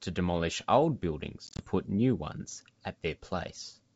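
From 1.47 to 1.65 s the speech stutters through hard-edged gaps of up to 20 ms, 80 ms in all, returning slightly distorted. This is packet loss on an ADPCM call: silenced packets left the decoder's predictor and step size out of step.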